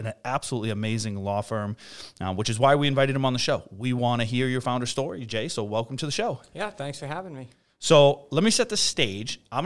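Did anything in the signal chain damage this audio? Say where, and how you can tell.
No, nothing in this speech recording stood out as damaged anywhere along the signal chain on listening.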